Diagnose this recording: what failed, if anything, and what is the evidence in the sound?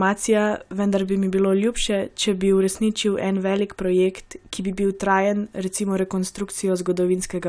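No fault can be heard.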